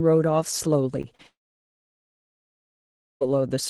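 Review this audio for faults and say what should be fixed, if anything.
Short concealed packet loss occurs twice, from 1.01 to 1.06 s and from 1.15 to 1.21 s. About 20 ms and then 40 ms of the stream arrived too late to decode, and the receiver bridged each hole by extending the preceding speech for roughly 24 ms and 37 ms before crossfading back. At the first point about 8 ms of real audio is also dropped. Each sounds like a quick smear or flutter in the speech. Larger jitter-buffer headroom and Opus in-band FEC would cover losses this short.

A long network dropout runs from 1.27 to 3.23 s, most likely caused by the connection stalling so that about 1.94 s of packets never arrived. The decoder briefly continues the last sound as a fading buzz. For about 1.88 s after that there is only silence, and the speech resumes at 3.23 s with the intervening material gone. A more stable network route, or retransmission with a deeper buffer where latency allows, would prevent a gap this long.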